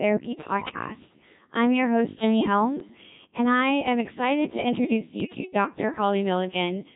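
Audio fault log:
throughout: Codec 2 vocoder. The speech passes through a very low-rate parametric coder, heavily degraded, consistent with the 1.3 kbit/s mode. Only pitch, voicing, energy and a coarse spectral envelope survive, and the decoder rebuilds the voice from sine waves instead of keeping the original waveform. The whole clip sounds robotic and buzzy, with a synthetic, hollow quality in place of natural vocal texture.
0.57–0.86 s, 2.80–3.02 s, 5.20–5.34 s: bit errors on digital voice radio. Flipped bits reach the vocoder's frames. Each bit steers pitch, level, voicing or spectral shape for a whole frame, so a corrupted frame decodes as a different sound. The first burst is the densest, at several percent of bits, and lasts about 0.3 s. The second ends just before "and I am excited", and the third follows "am excited to introduce", both at a few percent. Each burst breaks into sudden pitch and loudness jumps, warbles and bleeping gibberish.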